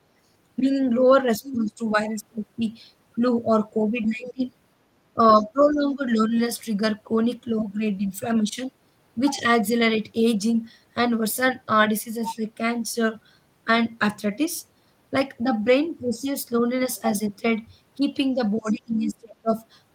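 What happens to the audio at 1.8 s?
At 1.8 s you're near the tail of a stretch of speech suppressed in double talk, running from 0.59 to 1.92 s. The speech dips unevenly, bottoming out around 10 dB down, and roughly half a second of that span gets pushed under. The likely cause is an echo canceller facing both ends talking at once. Unable to separate the near talker from its own loudspeaker echo, it turned everything down together.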